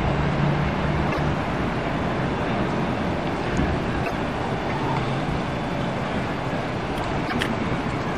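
At 1.09 to 1.20 s, 4.01 to 4.12 s and 7.22 to 7.33 s, damaged data in a compressed stream makes the decoder misread frames and lose sync, giving brief glitches of about 0.11 s each.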